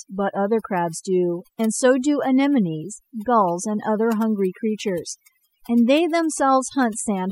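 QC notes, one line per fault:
Throughout, overdone noise removal: the noise reduction was run far too hard on a noisy speech recording, so any frequency band sitting close to the tool's noise estimate gets pushed right down or switched off, and the quieter parts of the voice are caught along with the noise. Between phrases the background drops and breaks up into twinkling specks.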